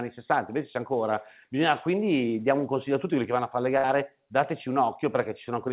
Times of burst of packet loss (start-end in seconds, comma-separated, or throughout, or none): 3.78-3.86